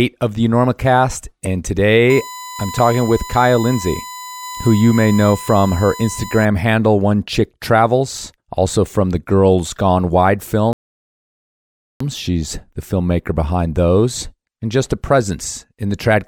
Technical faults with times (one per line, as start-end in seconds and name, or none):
2.10-6.45 USB whine
10.73-12.00 rebuffering stall